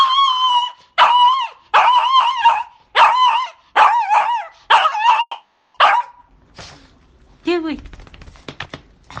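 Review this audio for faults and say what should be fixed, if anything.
From 5.21 to 5.76 s there's a long network dropout, likely: the sound smears into a fading buzz, then a brief gap, and about 0.4 s never returns. A deeper jitter buffer or redundancy would help.

From 7.71 to 9.15 s a jitter buffer speed-up trims roughly 0.1 s, running at 107% with pitch unchanged. Smoother buffer adaptation would prevent this.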